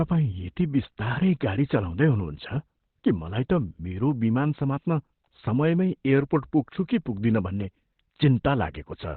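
Throughout, the speech sounds muffled and hoarse, with nothing above 4.3 kHz, the likely result of heavy Opus compression in narrowband speech mode, fitting about 12 kbps.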